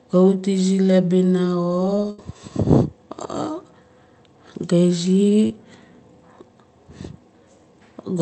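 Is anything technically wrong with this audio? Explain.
Yes, there are two packet-loss faults in this speech, heard through a call path whose Opus coding holds the top end to about 8 kHz.

Burst of packet loss, 2.10 to 2.19 s: a run of consecutive packets arrived too late or not at all, leaving 80 ms of the talker's audio missing. The receiver covered the hole by extending the last received sound for about 77 ms, lowering its level as the gap went on. The result is a brief held, fading tone or hiss, after which the speech picks up slightly further along with that stretch gone.

Short concealed packet loss, 5.47 to 5.51 s: about 20 ms of audio failed to reach the decoder in time. The receiver synthesised roughly 27 ms of replacement sound, continuing the preceding pitch or noise character, then crossfaded back into the real signal. Because the patch is so brief, it comes across as a small smear or flicker in the speech rather than an audible gap, and a short consonant there may be lost.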